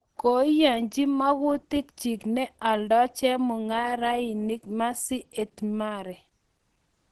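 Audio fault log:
Throughout, Opus compression: speech sounds muffled and hoarse with nothing above 12 kHz, likely a low-rate hybrid-mode encode near 16 kbps.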